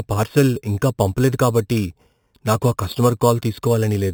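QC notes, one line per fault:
Throughout: imaging from sample-and-hold upsampling. The rate was raised by holding each sample flat with no smoothing filter, which fits an 8 kHz source raised to 48 kHz. Mirrored copies of the speech spectrum fold up around every multiple of the old rate. The lowest copy fills about 4 to 8 kHz at about 19 dB below the speech, heard as a bright metallic fizz that tracks the level and moves opposite to the pitch.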